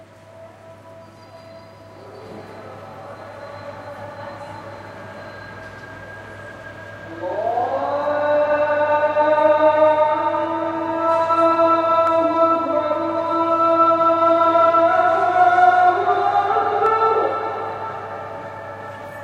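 A recording of sounds carries two sharp, isolated clicks, one at 12.07 s and another at 16.86 s, each a single tick with no gap or loss of sound around it. Both are likely dropped samples, where a tiny fraction of a millisecond of audio went missing from the stream. The waveform then jumps straight to a later value, and that sudden step produces a brief click spreading across the whole spectrum.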